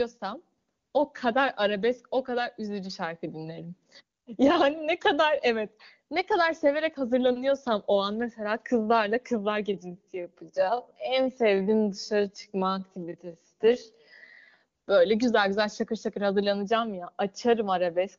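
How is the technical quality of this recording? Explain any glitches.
The recording has one clear glitch, a time-stretched section running from 9.70 to 14.62 s. Across that stretch the speech slows abruptly to roughly 0.62 times its normal pace while the pitch stays put. This is likely software stretching the audio to fill a set length by repeating short slices of the waveform, and the slowed speech drags. The wideband phone-codec sound, with clean speech and little or no coding roughness, points to a high AMR-WB rate.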